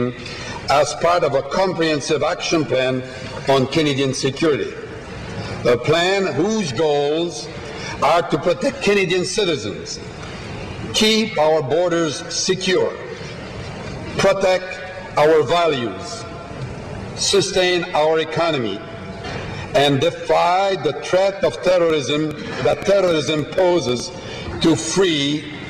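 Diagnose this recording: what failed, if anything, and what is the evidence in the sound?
A train of clicks runs from 21.90 to 24.01 s: around ten similar pulses at an uneven spacing, averaging 5.25 per second and standing about 10 dB above the sound. The likely source is at the analogue stage, with interference from nearby equipment or a faulty connection or power supply injecting a repeated impulse.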